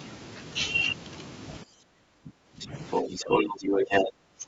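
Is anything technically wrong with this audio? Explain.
Yes. Speech suppressed in double talk occurs from 1.64 to 2.74 s and from 3.03 to 4.47 s. The level dips by up to about 20 dB, for roughly a second of gaps in each span. This is likely an echo canceller turning the talker down while both sides spoke. The waveform shows chopped, shrunken envelopes, and the spectrogram shows patchy holes.

The other side's voice is leaking through, briefly at 2.59 to 2.67 s about 10 dB below the talker, then from 2.9 to 4.11 s about 10 dB above. This is likely loudspeaker echo the canceller missed. On the spectrogram it appears as a second, overlapping harmonic pattern, band-limited like the rest of the call audio with nothing above 8 kHz.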